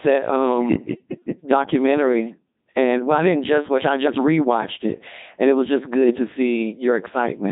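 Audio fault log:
throughout, Codec 2 vocoder: robotic, buzzy speech with heavily damaged detail, since a 2.4 kbit/s vocoder rebuilds the voice from pitch and envelope, not the waveform.
6.08–6.16 s, bit errors on digital voice radio: after "it was just", a brief warbling glitch jumps in pitch and tone, as corrupted bits, roughly a few percent, scramble the parameters of a couple of frames.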